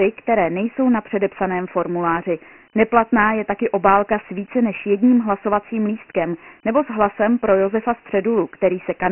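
From start to finish the speech carries Dialogic VOX ADPCM damage: coarse 4-bit adaptive steps, at a rate that fits 6,000 samples a second, leave a gritty hiss riding each syllable. A spectrogram shows nothing above 2.9 kHz and weak energy below 200 Hz, with speckled noise filling the band.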